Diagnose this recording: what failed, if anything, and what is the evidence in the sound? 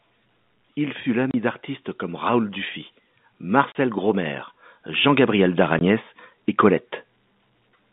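Two things went wrong, both after the audio was already on the line. The first is packet loss filled with silence, a network-stage problem. There are three hard dropouts in the speech: 1.31 to 1.34 s, 3.72 to 3.75 s (both 30 ms), and 5.79 to 5.81 s (20 ms). Each gap is cut clean with hard edges. The receiver played dead air instead of concealing the missing audio, and gap lengths in steps of 10 ms fit a 10 ms packet size.

The second is automatic gain rising, which happens in call processing. From 3.42 s to 6.04 s the level creeps up by about 5 dB, and the background noise swells right along with the speech. That tells you it's the gain control deciding the input was too quiet and slowly turning it up, not someone speaking louder. It's a slow ramp over roughly two and a half seconds, and the 3.72 s dropout lands inside it. The G.711 telephone coding underneath sounds right for a phone line, with nothing above about 3.7 kHz.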